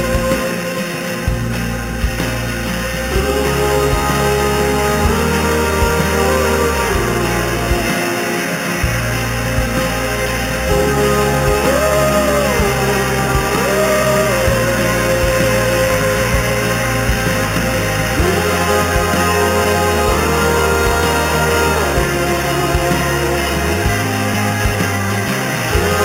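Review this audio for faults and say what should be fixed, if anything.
The whole clip, start to finish, carries imaging from sample-and-hold upsampling. It sounds like audio that lived at 8 kHz and was brought up to 48 kHz by repeating each sample six times with no smoothing, so the steps leave mirrored copies of the spectrum. The first one sits between 4 and 8 kHz at about 13 dB below the signal. That's the metallic fizz riding on top, rising and falling with the sound and drifting against its pitch. To prevent it, run the upsampler with a proper anti-imaging low-pass filter that cuts everything above 4 kHz.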